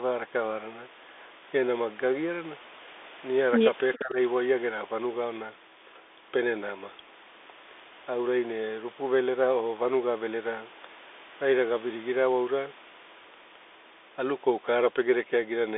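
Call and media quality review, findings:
Bluetooth CVSD headset codec, full clip: narrowband speech, nothing above 3.8 kHz, band roughly 300 Hz to 3.6 kHz. Scratchy sibilants, granular hiss under speech, overload on loud bright sounds where the one-bit delta step cannot keep up, consistent with 64 kbit/s CVSD.

Echo leak, 3.94 to 4.0 s: brief, faint delayed copy of speech, about 406 ms behind, roughly 25 dB under the talker. Likely a far-end loudspeaker path the echo canceller did not fully remove, returned down the line.

Speech suppressed in double talk, 3.97 to 4.17 s: talker level dips around 20 dB for about 200 ms, overlapping the echo burst. Canceller probably could not separate near talker from loudspeaker echo during simultaneous speech and attenuated both.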